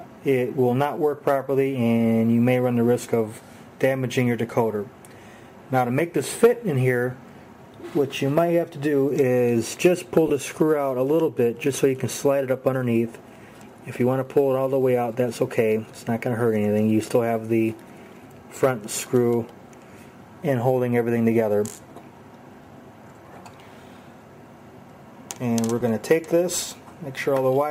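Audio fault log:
10.28 to 10.30 s and 25.80 s, lost LE Audio frames: two brief gaps, about 20 ms and 10 ms, which fits two 10 ms frames and then one. The LC3 decoder refilled each gap by repeating the last spectrum with random signs, so tones blur into a short noisy smear. That smear, not a hard silence or a click, sets these apart from a plain dropout, and both gaps are too short for the fade-out to be heard.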